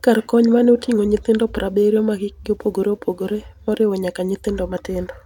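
No technical faults are audible.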